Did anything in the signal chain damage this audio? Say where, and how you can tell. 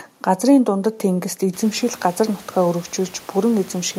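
No, nothing in the signal chain damaged this speech audio. The room noise around the microphone rises by about 24 dB at roughly one and a half seconds and then sits about 27 dB below the speech, which is part of the acoustic scene rather than the equipment.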